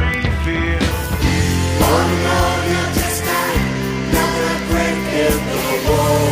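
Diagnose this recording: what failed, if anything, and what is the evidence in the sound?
The failure is in the digital interface between devices: word clock ticks. From 0.14 s to 6.29 s there is a steady train of sharp ticks, roughly one every 40 ms and around 150 in all, with uneven strength. The receiving converter was free-running rather than locked to the sender's clock. The two clocks drift by around 500 ppm. At each slip, one sample is dropped or repeated, leaving a brief discontinuity that is heard as a tick.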